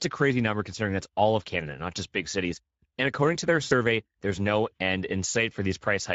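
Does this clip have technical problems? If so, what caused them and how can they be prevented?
Yes. Speex codec damage runs through the whole clip and is plainly audible: the speech sounds hoarse and grainy, because this CELP coder has too few bits to model the excitation faithfully. The upper band is a shaped noisy fill rather than real detail. The level of damage points to a middle Speex setting of roughly 16.8 kbps. To prevent it, record or transmit with a higher-quality setting or a modern codec such as Opus.

VoIP packet loss concealed by the speech codec occurs from 3.63 to 3.74 s, between "according to their" and "there's no end". About 80 ms of audio is missing, which fits four lost 20 ms frames. The decoder repeats its last pitch and filter with falling gain, so the speech smears into a buzzy tone or coloured noise that fades, and the voice stays weakened briefly after packets resume. 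A jitter buffer with forward error correction or redundancy on the network link would prevent it.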